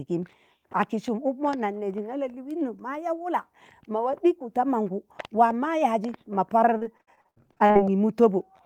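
Repeated packet loss (robotic sound) runs from 6.77 to 7.79 s in this speech. A dozen or so short dropouts, the longest 59 ms, are each patched by stretching the preceding sound, so about 41% of that second is filler and the speech turns choppy and broken.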